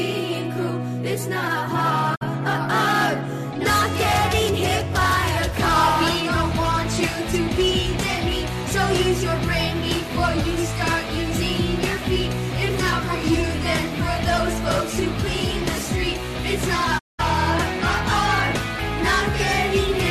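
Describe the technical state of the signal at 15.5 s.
At 15.5 s the signal is intact, with no audible dropout, distortion or other fault at that moment.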